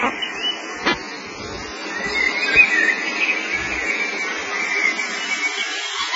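AAC compression runs throughout the clip. Nothing survives above 7.5 kHz, leaving the sound dull and smeared with a warbling, fizzy texture. This likely comes from heavy AAC-LC coding, which fits a very low bitrate of about 16 kbps that starves the frequency lines of bits.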